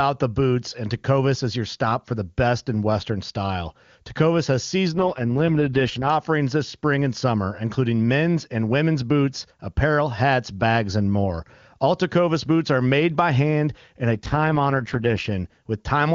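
Twice the speech goes rough and synthetic, from 4.94 to 6.09 s and again from 14.14 to 15.26 s. That's an AMR rate drop: a weak link pushes the codec down to spend bits on error protection. The sound fits a fall from 23.85 to 6.6 kbit/s. Bandwidth holds and there are no gaps.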